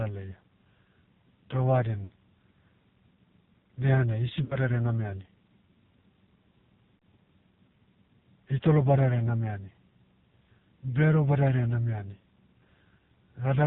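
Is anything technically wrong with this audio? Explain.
Yes. Throughout, the speech has passed through the AMR narrowband mobile codec at a low rate that fits about 5.9 kbps. The codec samples at 8 kHz and rebuilds the voice from a vocal-tract model excited by a handful of pulses per subframe, so nothing above 4 kHz survives. At this bit budget the damage is heavy: the voice sounds muffled, buzzy and synthetic.

Lost AMR speech frames occur at 2.04 to 2.09 s, 4.44 to 4.57 s (just after "dehanai hisi"), and 6.96 to 6.99 s, each a gap of about 60 ms, which suggests three consecutive frames. The decoder filled each gap by repeating the last good pitch and vocal-tract settings at falling gain, so the sound smears briefly, fades, and returns weak or rough.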